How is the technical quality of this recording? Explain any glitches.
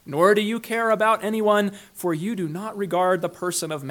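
The technical quality of this recording is sound, with no glitches to explain.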